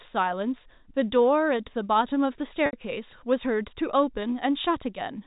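At 2.66 to 2.73 s, 70 ms of speech is lost to packet loss with pitch repetition. The receiver loops the last pitch period, so a held, buzzy tone fades toward silence before a brief cross-fade. A plain dropout would leave a hard gap instead.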